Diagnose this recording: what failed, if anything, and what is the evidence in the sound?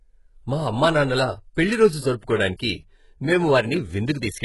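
The codec stage failed, most likely through HE-AAC compression. Throughout the speech, the treble is bright but synthetic: s sounds are gritty and lispy, and nothing sounds above 11.5 kHz. The heavy damage fits a bitrate near 12 kbps. A plain low-pass would sound dull, not metallic, because spectral band replication copies lower bands upward instead of keeping the real treble.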